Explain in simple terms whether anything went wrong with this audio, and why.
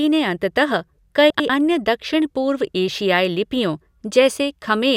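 Something did go wrong, briefly, at about 1.30 to 1.49 seconds in this speech. The fault is frames out of order. Two short chunks of audio, each about 96 ms, arrived in the wrong order. They were played back that way. So the second chunk plays first, then the first. The result is a garbled flutter. No audio is missing. It is just shuffled.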